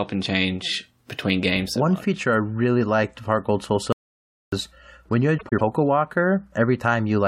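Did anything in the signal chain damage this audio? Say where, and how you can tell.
Yes. At 3.93 s the speech stops dead and stays in total silence until 4.52 s. There is no room tone in the gap. About 0.6 s of speech is simply gone. That is an audio dropout to silence. The recorder kept writing samples while its input delivered nothing. The likely cause is a brief loss at the capture stage, such as a disconnected device, a failed link or a stray mute.

The second fault sits between 5.38 and 5.61 s. That stretch sounds garbled and fluttery. Two adjacent blocks of about 104.5 ms each play in swapped order, which fits runs of four frames. These are frames out of order. The transport delivered them in the wrong sequence and the decoder played them as received. The total duration is unchanged, which points to the network or packet-reordering stage.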